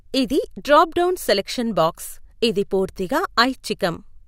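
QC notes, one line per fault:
QC notes: there is no fault to log for this speech.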